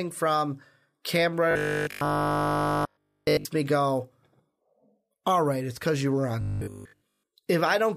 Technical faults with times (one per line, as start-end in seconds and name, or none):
1.51-3.45 robotic sound from repeated short buffers
6.41-7.27 robotic sound from repeated short buffers